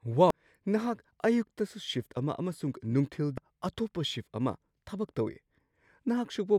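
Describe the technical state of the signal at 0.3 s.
At 0.30 s the compressed speech stream carries damaged data: data there is corrupted, so the decoder misreads the affected frame, loses sync and hunts for the next valid frame header. The result is a brief glitch cutting into the sound.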